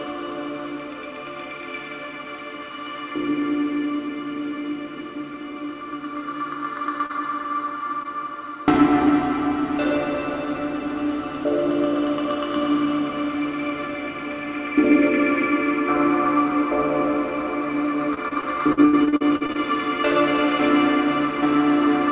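At 7.06 to 7.11 s and again at 8.03 to 8.06 s, short concealed packet loss occurs: brief runs of call audio arrived too late, so the receiver extended the preceding sound to cover them and crossfaded back, leaving quick smears. The audio is band-limited, with nothing above 4 kHz, which suggests a narrowband telephone codec.

From 18.14 to 19.56 s, repeated packet loss (robotic sound) sets in. Eleven separate gaps, the longest 76 ms, each get patched by stretching the last sound, so about a quarter of that stretch is synthetic and comes out choppy and broken.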